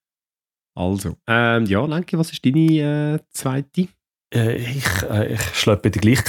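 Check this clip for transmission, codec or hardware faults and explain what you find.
No transmission, codec or hardware faults turn up in this speech recording, and the signal holds steady throughout with nothing that points to a problem anywhere in the chain.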